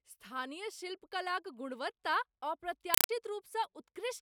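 A speech clip in which, from 2.94 to 3.09 s, the sound is replaced by loud, harsh chattering static: a compressed stream played as audio. An AC-3 bitstream has been passed through as if it were ordinary samples rather than decoded, so each coded frame comes out as a 4 ms burst of noise followed by silence, repeating 31.25 times a second. That rate and density point to a Dolby Digital stream at around 192 kbps. On a waveform the span shows as narrow slabs of high amplitude separated by flat gaps. On a spectrogram it appears as vertical broadband stripes, evenly spaced and reaching the top of the frequency range.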